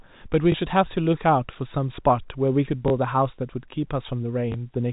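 At 0.52 to 0.54 s, 2.88 to 2.90 s and 4.52 to 4.54 s there is packet loss with last packet repeated. Each 20 ms gap, which fits one lost packet, is refilled with the preceding audio, giving a small blip rather than the silent hole of a plain dropout.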